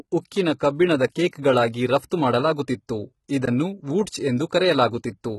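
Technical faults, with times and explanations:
Throughout: HE-AAC compression, heavy damage. Nothing is heard above 11.8 kHz. The treble that remains does not sound like the original. It sounds rebuilt, likely from HE-AAC spectral band replication at a very low bitrate, around 16 kbps. That method codes only the lower band. It copies those bands upward and shapes them with a coarse envelope. The copied harmonics do not line up with the real ones at the crossover. So s sounds come out gritty, metallic or lispy.
1.14, 1.72, 2.10 and 4.49 s: pre-echo. Each time, a short hiss comes just before a sharp attack. It lasts between 16 and 18 ms. The attack itself sounds soft or smeared. This is how a transform codec handles an attack that falls late in its block. It spreads quantisation noise evenly over the whole block. Noise sized for the loud onset therefore also fills the quiet moment before it.
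3.46 to 3.48 s: block of digital silence. The sound drops out for 20 ms. It cuts out and comes back with no fade, so the edges are abrupt. That is long enough to be heard as a short hole rather than a tick. A block of zeros was played in place of the audio. Either the output buffer was not filled in time, or a calculation gave invalid numbers.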